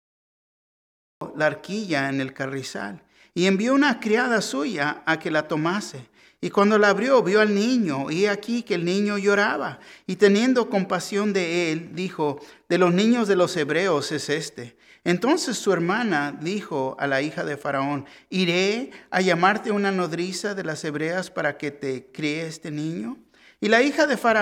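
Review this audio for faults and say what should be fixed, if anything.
The clip has a cut-off start: digital silence from 0.00 to 1.21 s, then the sound begins abruptly mid-event at 1.21 s with no attack or fade-in. The waveform shows a flat line jumping straight into the signal; the spectrogram shows a sharp vertical edge. Start recording or buffering before the source begins so the opening is captured intact.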